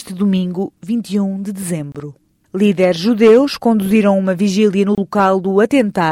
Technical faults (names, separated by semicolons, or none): gap at a join of encoded pieces